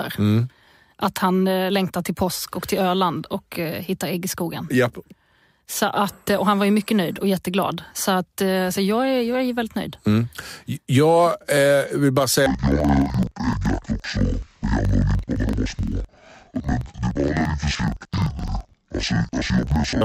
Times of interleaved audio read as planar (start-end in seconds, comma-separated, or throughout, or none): 12.46-20.05